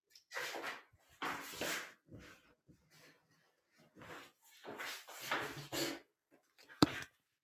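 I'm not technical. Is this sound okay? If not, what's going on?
No. A noise suppressor applied to music or sounds was left switched on. It is built for voices, so it mistakes steady sounds and lingering echoes for background noise. Throughout, the level rises and falls unevenly, making the audio pump and thin out.

In places you can hear sound cut by the noise suppressor. Held or fading sounds suddenly sink, while sharp hits survive. This happens at 0.93 to 1.1 seconds, 2.41 to 2.94, 3.14 to 3.97, 6.03 to 6.71, and from 7.08 to the end.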